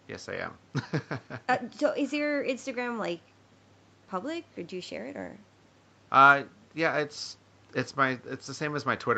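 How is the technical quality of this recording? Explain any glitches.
No glitches are audible in the speech; the band stops at about 8 kHz, consistent with a wideband call path.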